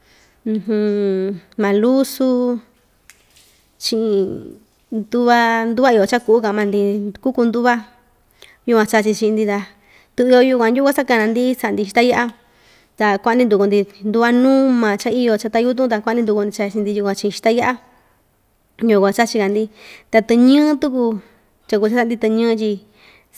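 No technical faults are audible.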